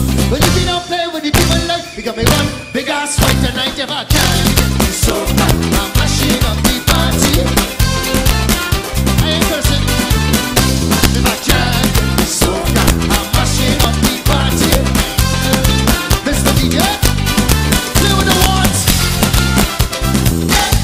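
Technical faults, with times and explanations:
Throughout, integer overflow: peaks driven about 3 dB past full scale wrap to the opposite sign, giving sharp cracks; the waveform shows full-range flips, the spectrogram broadband vertical streaks.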